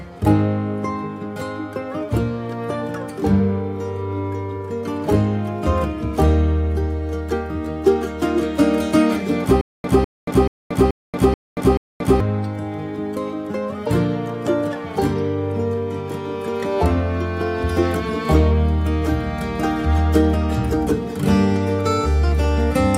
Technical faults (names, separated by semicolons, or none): stutter with silent gaps